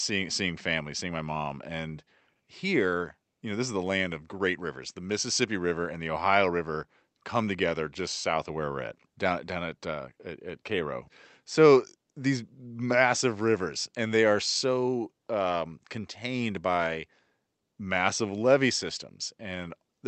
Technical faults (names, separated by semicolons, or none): none